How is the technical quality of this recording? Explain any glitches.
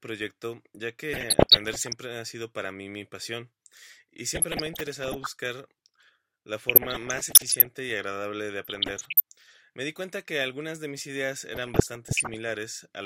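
The speech is repeatedly disrupted by DAB burbling at 1.13–1.93 s, 4.35–5.27 s, 6.69–7.67 s, 8.64–9.20 s and 11.54–12.36 s. Residual bit errors, under one percent, corrupt MP2 sub-band samples, producing short blips of noise in single sub-bands.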